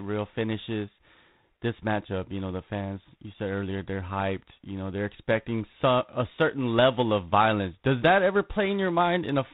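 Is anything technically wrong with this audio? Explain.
Yes. The whole speech clip carries G.726 ADPCM coding damage. This codec does not send the waveform directly. It sends only the small difference between each sample and an adaptive prediction, using very few bits. Here the damage fits the 24 kbit/s mode, which allows three bits per sample. That coarse step adds plainly audible quantisation noise. It is a harsh, rasping hiss that rises and falls with the speech level. Nothing above 4 kHz gets through, so the sound is narrow and telephone-like.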